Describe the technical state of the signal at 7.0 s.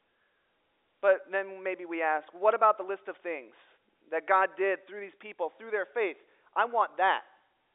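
At 7.0 s the speech is intact, carried through the narrow 300 Hz to 3.7 kHz band of G.711 telephone coding with no fault audible at that moment.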